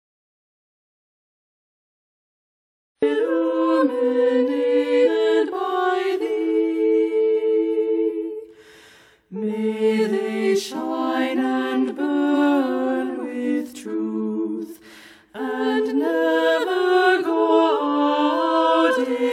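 The input signal was most likely lost before the clip begins, perhaps through a disconnected device or a failed link, while the recorder kept writing silence. This audio dropout to silence is already under way at 0.00 s and lasts until 3.02 s. Those first three seconds are silent, with no room tone at all, and the sound then enters abruptly in mid-flow.

Later, whole blocks of the compressed stream go unplayed, either missing from the file or rejected by the decoder as damaged. The jump sizes point to frames of about 46 ms. These compressed frames skipped events occur at 5.04 to 5.09 s and at 8.06 s, each dropping about four frames (roughly 200 ms), at 12.33 to 12.38 s, losing a single frame (around 50 ms), and at 17.49 s, losing about three frames (roughly 150 ms). At each point the audio lurches forward.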